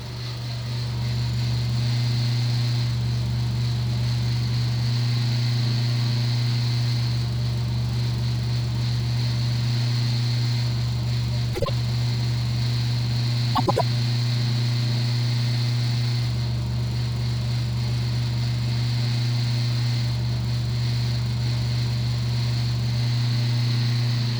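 At 11.54 to 11.70 s and again at 13.55 to 13.81 s, the audio has frames out of order. Two adjacent blocks were swapped before decoding, so each stretch plays with its halves exchanged: about 52 ms blocks in the first case and about 104 ms in the second. That points to runs of a few codec frames each. Each stretch sounds like a brief garbled flutter. No time is lost.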